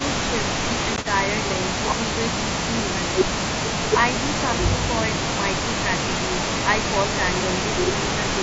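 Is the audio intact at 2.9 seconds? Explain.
Yes, the audio is intact at 2.9 seconds, with no fault at that point in the speech.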